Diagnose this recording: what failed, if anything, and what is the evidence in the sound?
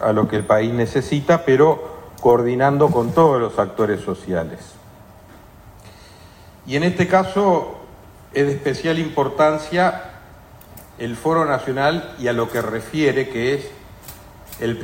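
Nothing failed in this recording, and the sound gives no evidence of a fault at any stage.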